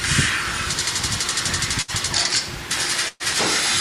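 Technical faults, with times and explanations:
1.81–1.91 s and 3.08–3.23 s, burst of packet loss: in each, packets arrived too late or not at all, so the receiver extended the last received sound while fading it, heard as a held buzz or decaying hiss, then resumed later in the signal. The first concealment lasts 66 ms and skips 60 ms of audio. The second lasts 119 ms, includes about 10 ms of silence, and skips 120 ms.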